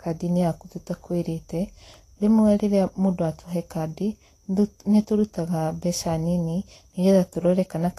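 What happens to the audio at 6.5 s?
Vorbis compression is audible at 6.5 s, as it is through the whole clip. Nothing is heard above 14.2 kHz, and the remaining treble is coarsely quantised against a smooth spectral floor, so fine detail turns into grainy hiss and consonant attacks blur. This likely comes from low-bitrate Vorbis encoding, around 34 kbps.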